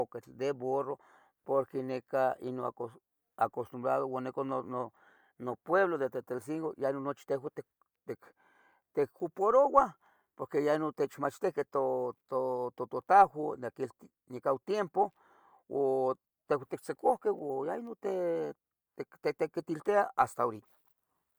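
No technical faults detected.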